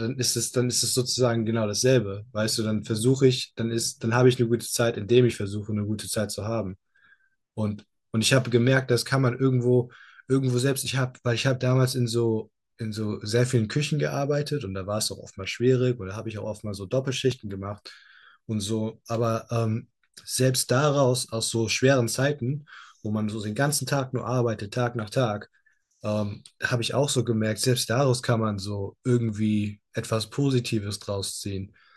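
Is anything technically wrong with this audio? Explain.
Yes. At 17.32 s and 29.29 s, an overlap between stream segments, which fits 6-second segments, made the player trim about 8 ms and 12 ms of real speech, leaving tiny skips.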